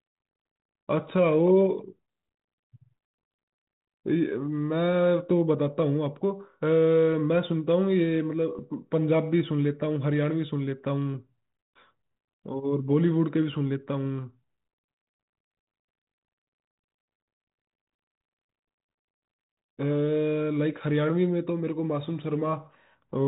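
At 8.58 to 8.60 s, bit errors on the G.726 ADPCM link flip a few bits; the disturbed decoder predictor produces a brief rough pop with a momentary level jump.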